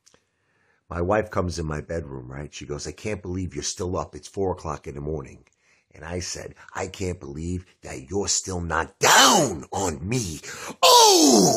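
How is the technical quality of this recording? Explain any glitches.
Nothing in the recording stands out as a glitch, so there's nothing here to explain.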